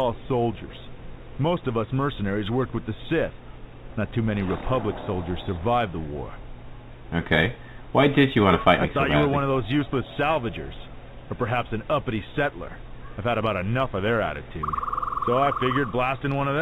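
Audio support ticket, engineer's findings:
Sample clock jitter, throughout the clip. Converter clock timing wanders by roughly a microsecond or two rms, so samples land early or late. Error follows waveform slope: hiss and roughness swell on loud, bright passages, around 45 dB under the signal, and gone in silence. Band ends at 4 kHz, consistent with G.711 mu-law at 64 kbps.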